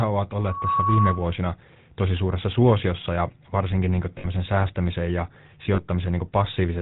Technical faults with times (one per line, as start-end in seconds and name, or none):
0.00-6.82 GSM full-rate codec
0.35-1.33 loudspeaker feedback squeal
4.18-4.27 lost GSM frames
5.74-5.80 lost GSM frames